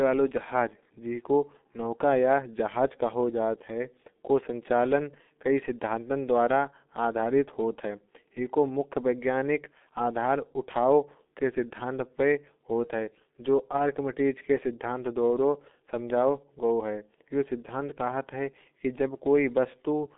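From start to finish, this speech carries the sound of the G.723.1 codec, a low-rate telephony coder. The audio sits inside a narrow line band of about 200 Hz to 3.6 kHz. Nothing is heard above 3.8 kHz. The damage is heavy. At roughly 6.3 kbit/s, the coder rebuilds the voice from a model refreshed only every 30 ms. The result sounds muffled and hoarse. Consonants smear together.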